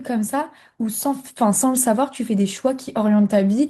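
No technical faults can be heard anywhere in the recording; the signal holds steady, with nothing disturbing it at any point.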